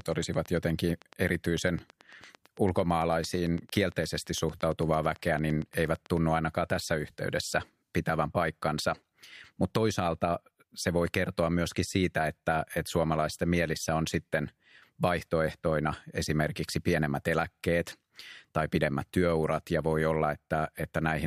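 Right from the start, 0.01 s through 6.18 s, ending just before "ainakaan tässä yhteydessä pitävän", there's a train of clicks: around fifty evenly spaced ticks at 8.9 per second, hitting about as loud as the speech itself and popping through the pauses too. Likely interference from nearby gear or a faulty connection or power supply.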